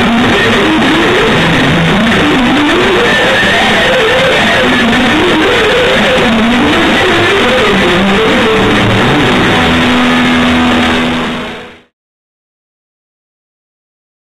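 Nothing stood out on listening, and the gentle fade-out that begins around 10.5 s and reaches silence at 11.94 s sounds like a deliberate edit rather than a problem.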